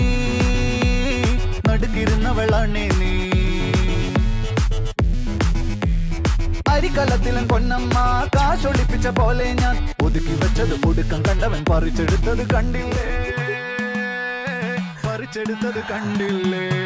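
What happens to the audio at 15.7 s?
Nothing goes wrong at 15.7 s; the audio continues intact there, with no dropout, click or distortion at that point.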